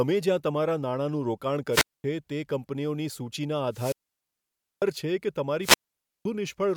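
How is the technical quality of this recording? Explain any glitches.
The recording is marred by three wireless microphone squelch dropouts, at 1.71–2.04 s, 3.70–4.86 s and 5.61–6.25 s. The FM radio link fades until the receiver's squelch mutes the output. Each dropout brings a brief swell of hiss, then near silence lasting about 0.23 s, 0.90 s and 0.52 s respectively, before the speech returns.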